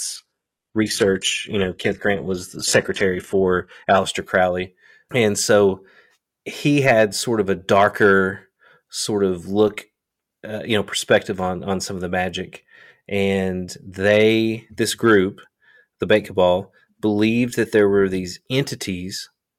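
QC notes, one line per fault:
0.0–4.0 s, adaptive stream starting at a low bitrate: for the first four seconds the speech sounds dull, with a thin, synthetic top end and stronger codec artefacts. This points to a very low-bitrate version near 16 kbit/s that rebuilds the treble instead of coding it. At 4.0 s, once the player has measured the connection, quality jumps with no gap to a version consistent with 96 kbit/s, and genuine treble extends to 12.3 kHz.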